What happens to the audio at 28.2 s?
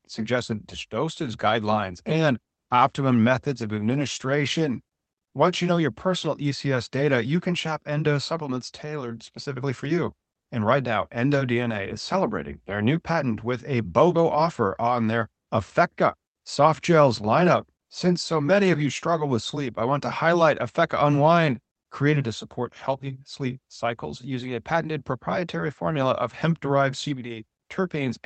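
At 28.2 s the speech comes through intact, with nothing going wrong at that moment beyond the ordinary sound of the call path it travelled through.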